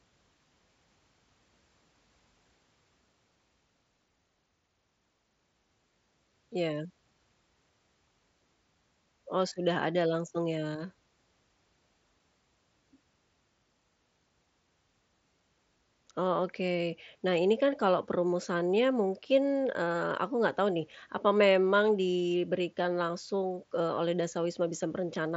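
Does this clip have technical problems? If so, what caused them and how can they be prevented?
Yes. From 20.30 s to the end, channel delay (comb filtering) from one channel running about a sample late before the mono sum gently dulls the speech, visible as fading upper bands on a spectrogram. Align both channels to the sample before summing.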